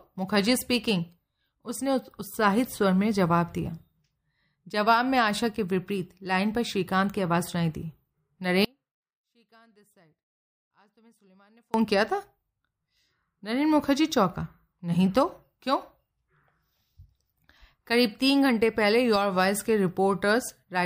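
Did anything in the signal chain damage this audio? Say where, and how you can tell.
Yes, likely an upstream signal break while the path stayed live: an audio dropout to a faint residue, abruptly cutting from 8.65 to 11.74 s, leaving sound roughly 35 dB down.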